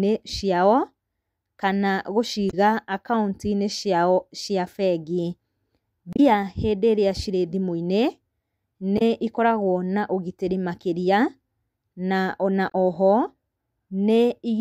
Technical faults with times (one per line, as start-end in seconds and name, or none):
2.49-2.54 damaged data in a compressed stream
6.13-6.20 damaged data in a compressed stream
8.97-9.02 damaged data in a compressed stream
12.70-12.75 damaged data in a compressed stream